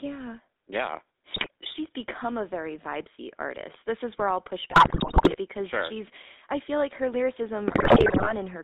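Throughout, the speech passes through a GSM full-rate codec, which fits a 13 kbps coder that models the vocal tract and excites it with a sparse, regularly spaced pulse train. The line band runs only from about 250 Hz to 3.7 kHz, so the low warmth and upper brightness are gone. The coarse excitation gives every syllable a plainly audible buzzy, gravelly roughness.

GSM bit errors strike three times, from 1.34 to 1.48 s, from 4.70 to 5.37 s and from 7.68 to 8.32 s. Corrupted bits reach the decoder and garble its filter, pitch and gain values. The first burst is brief. The second and third last around two thirds of a second each, and there the speech collapses into squawks, pops and gargling as the spectrum warps and the level lurches from frame to frame.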